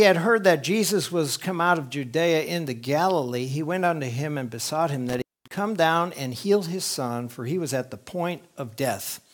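At 5.09 s an intermittent contact interrupts the sound until 5.58 s. A loose connection opens for about 236 ms, cutting the audio with crackles and leaving faint hiss.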